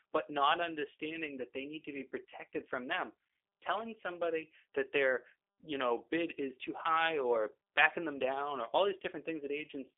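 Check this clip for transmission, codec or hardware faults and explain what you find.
The whole clip carries the sound of a G.729 codec, the low-rate VoIP coder, audible from start to end. Nothing reaches above about 3.6 kHz, and the lows thin out below roughly 300 Hz. The speech is rebuilt from a vocal tract filter, a pitch model and a few pulses per 10 ms frame, which fits an 8 kbit/s stream, so it sounds rough and faintly synthetic. That buzzy, modelled texture separates it from simple telephone band-limiting, which narrows the band but keeps the voice natural.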